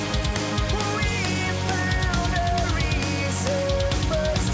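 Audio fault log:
No faults are present: the signal carries the ordinary coding character of a WebRTC call path with no content above 8 kHz, which fits a wideband codec such as G.722 at 64 kbps.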